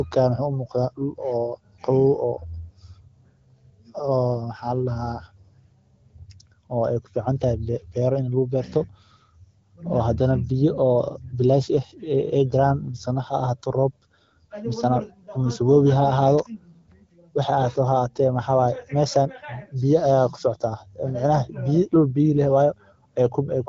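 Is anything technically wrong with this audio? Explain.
No, nothing is technically wrong with this speech.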